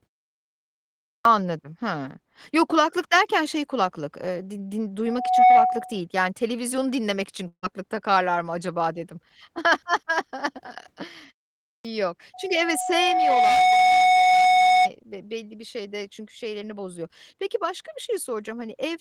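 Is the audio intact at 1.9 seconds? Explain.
Yes, the audio is intact at 1.9 seconds, with no fault at that moment.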